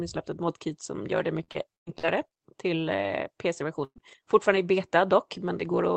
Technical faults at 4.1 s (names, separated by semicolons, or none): lost packet rebuilt from error correction